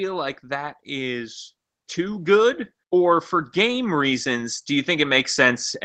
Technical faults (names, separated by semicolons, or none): automatic gain rising